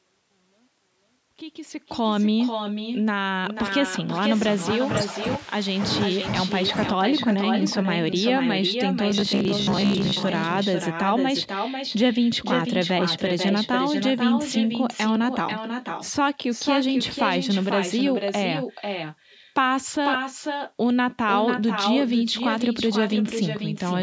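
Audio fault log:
Throughout: echo with no canceller. Every phrase returns about half a second later, at about 6 dB below the original speech, and thinner. The far end's loudspeaker feeds its microphone, and nothing removes that copy before it travels back.
9.11 to 10.23 s: robotic sound from repeated short buffers. The speech becomes a rigid metallic buzz at 66.8 Hz that only loosely follows the words. The likely cause is late audio, with most of this stretch filled by looping roughly 15 ms segments, which fits a buffer of that length.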